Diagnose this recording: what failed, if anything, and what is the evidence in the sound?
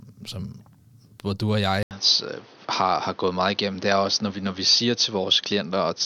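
At 1.83 s the speech drops out for 80 ms. Afterwards nothing remains above 6.4 kHz. The level shifts a few dB, and new noise sits about 30 dB down until the end. At the driver stage, input likely switched to a poorer device.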